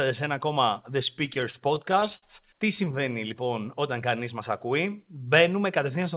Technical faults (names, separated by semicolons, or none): repeated stalls (stutter)